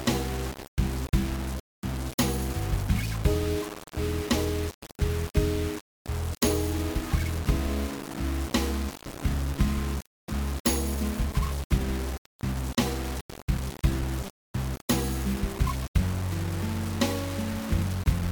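Grainy, signal-following distortion runs through the whole clip, with quiet passages turning gritty and the softest parts sputtering or dropping out. That's low bit depth without dither, likely from rounding to only about 4 bits, leaving an error floor roughly 15 dB below the sound.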